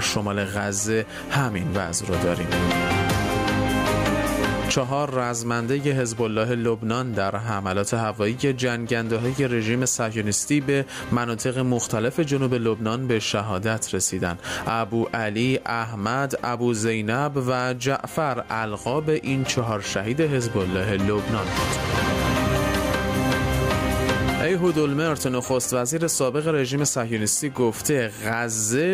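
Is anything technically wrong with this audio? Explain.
Yes. Gain pumping runs through the whole clip: the gain ducks by around 15 dB under each loud sound, leaving the dynamics squashed. The likely cause is input gain set far too high, with a fast limiter clamping every peak.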